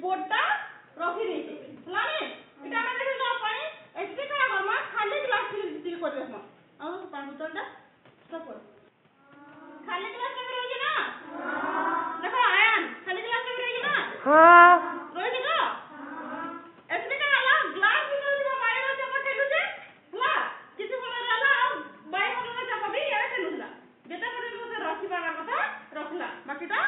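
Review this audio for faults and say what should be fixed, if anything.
No faults turn up in this audio, so nothing needs to be fixed.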